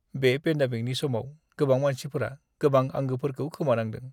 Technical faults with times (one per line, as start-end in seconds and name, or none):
none